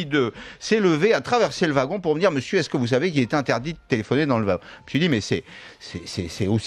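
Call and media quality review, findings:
Nothing to flag here; I listened through and heard no audible problems in the transport or playback path.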